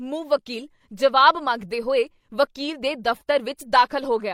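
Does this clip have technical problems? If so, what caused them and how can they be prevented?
No, this clip has no technical problems, so there is nothing to prevent.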